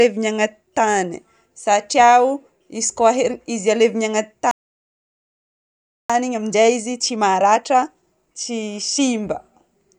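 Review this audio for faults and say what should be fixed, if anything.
Playback stall from 4.51 to 6.10 s: the speech just drops out for about 1.6 s, most likely because the player ran dry or its thread got blocked.

Then time-compressed catch-up from 6.10 to 9.10 s: it trims small chunks to recover the backlog, so speech runs 1.25 times fast at normal pitch.

To prevent both, give the player a deeper buffer and keep its audio thread from being starved.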